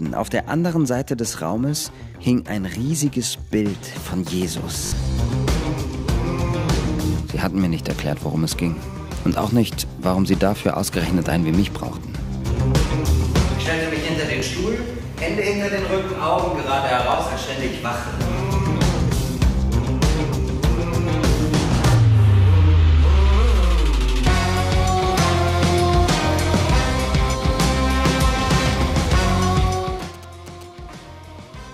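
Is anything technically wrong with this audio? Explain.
Yes, there are two problems. The first is a repeated buffer at 4.86–4.92 s, where one short piece is played three extra times, and at 14.40–14.42 s and 17.12–17.14 s, each with one extra play. The playback device ran dry and replayed its last chunk, which fits a 20 ms buffer. It is heard as a brief stutter with hard joins, and about 70 ms of audio is lost at the first event.

The second is GSM signalling bursts from 28.73 to 30.63 s. A nearby 2G phone's short groups of signalling bursts were rectified by the audio circuitry. The result is a galloping dit-dit-dit of short 217 Hz buzzes, about 25 dB below the programme level.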